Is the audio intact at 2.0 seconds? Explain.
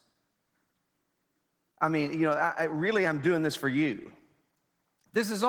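No. Opus voice compression runs through the whole clip, including 2.0 s: at about 16 kbps in hybrid mode, coarse excitation coding leaves the speech audibly hoarse and slightly robotic.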